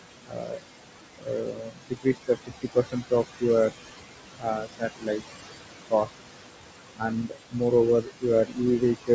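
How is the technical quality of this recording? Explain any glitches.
The quality is compromised by aggressive noise suppression acting on speech, heard against room noise about 8 dB below the voice and a bandwidth ending at 8 kHz, which fits a G.722 call path.

Noise suppressor artifacts run throughout. The suppressor pulls the steady room noise down by about 21 dB frame by frame, so the background pumps between phrases.

Speech cut by the noise suppressor occurs at 0.26–0.66 s, 1.18–3.76 s, 4.39–5.46 s, 5.9–6.19 s, 6.97–7.62 s and 8.01 s to the end. The suppressor mistakes quieter speech for noise and drops it by about 20 to 22 dB, swallowing soft consonants and word endings in short bursts. The cuts within the 1.18–3.76 s stretch add up to about a second.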